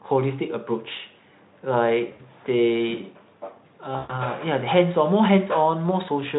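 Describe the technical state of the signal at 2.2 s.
At 2.2 s the speech is in a stretch of VoIP packet loss concealed by the speech codec, from 2.11 to 2.21 s. About 80 ms of audio went missing, which fits four lost 20 ms frames. The decoder filled the gap by repeating its last pitch and spectral shape at falling gain, so the sound smears into a fading buzzy tone or coloured noise. A hard dropout would instead leave silence or a click.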